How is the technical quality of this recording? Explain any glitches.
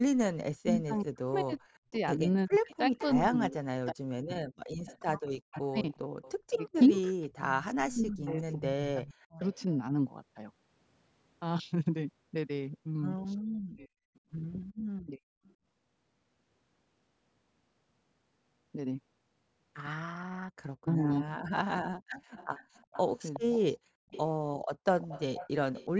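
The recording has clear echo-canceller problems, with the speech band ending at 8 kHz as expected from call processing.

Speech suppressed in double talk occurs from 0.57 to 9.65 s, 13.72 to 15.2 s and 20.83 to 23.53 s. The speech dips by about 40 dB, for roughly 5 s in the first span and about a second or less in the others. The likely cause is the canceller mistaking simultaneous talk for echo and attenuating both.

Echo leak appears at 2.7 to 3.04 s, 4.87 to 9.59 s, 14.15 to 15.54 s and 22.36 to 25.89 s. A copy of the speech returns 368 ms late, at about 15, 25, 35 and 15 dB below the main speech. The likely cause is a loudspeaker endpoint whose canceller lets residual echo through.

Background gated by the echo canceller occurs once, from 23.86 to 24.08 s. The room sound drops by about 31 dB for roughly 150 ms, then returns. The canceller clamps the microphone while the loudspeaker plays and releases it shortly after.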